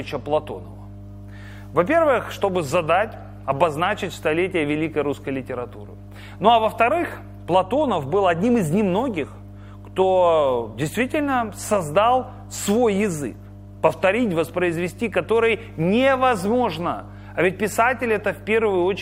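A steady mains hum runs through the entire audio, a low tone fixed at 50 Hz and sitting roughly 20 dB below the main signal. The cause is power-line coupling, from a ground loop or a nearby transformer leaking the 50 Hz supply into the signal path. On a spectrogram it appears as an unbroken horizontal line at 50 Hz; on the waveform, a regular 20 ms ripple shows under quieter passages.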